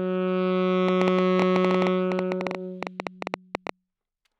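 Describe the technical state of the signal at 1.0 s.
At 1.0 s a train of clicks is underway, running from 0.89 to 3.70 s. Something, likely nearby interference or a faulty connection, injects near-identical pulses about 10 times a second at an uneven pace. Some thirty pops tick well above the sound.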